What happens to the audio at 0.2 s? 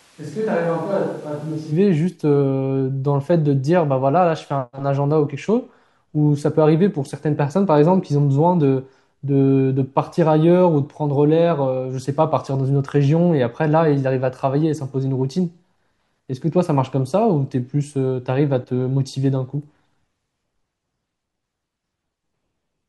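At 0.2 s the speech sounds roomy, hollow and thin, roughly 10 dB quieter, with more room noise, which likely means a switch to a distant microphone from the start until 1.70 s. The abrupt jump back to close sound sets it apart from gradual reverb.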